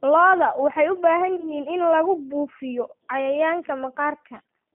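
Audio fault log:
Throughout: G.729 codec. The speech is rebuilt from a vocal tract filter, a pitch predictor and sparse pulses at about 8 kbit/s, so it sounds rough and slightly synthetic, and the line band of roughly 150 Hz to 3.5 kHz leaves it narrow. Unlike plain low-pass filtering, the damage lies in the texture of the sound, not only in its bandwidth.
1.36 to 1.55 s: VoIP packet loss concealed by the speech codec. Right after "waxay u baahan" about 20 ms of audio is missing, which fits a single lost packet. The decoder stretches its last pitch and filter into a fading buzzy tone or coloured noise, and because each frame depends on the one before, the sound stays weak until "in lagu buufiyo cayayaanka". A plain dropout would give silence, not a tonal smear.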